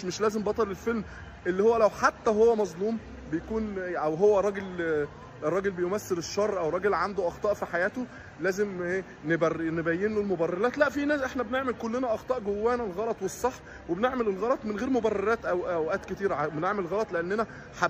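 Nothing in the audio stood out as a technical problem on listening.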